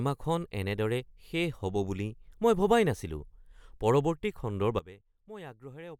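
At 4.79 s the level drops abruptly by about 17 dB and stays down to the end. This is a sudden gain jump. The speech and background noise fall together, with no fade. The likely cause is a gain setting applied without a ramp.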